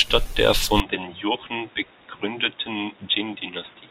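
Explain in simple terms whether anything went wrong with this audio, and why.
From 0.8 s onward the speech abruptly turns dull, a little quieter and picks up faint new background noise, likely because the input switched to a poorer device.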